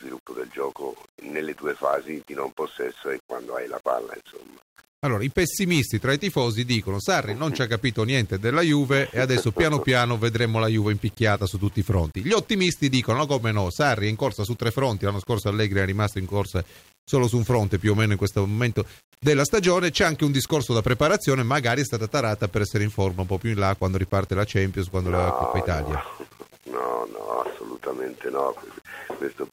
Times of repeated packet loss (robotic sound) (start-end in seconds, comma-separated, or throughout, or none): none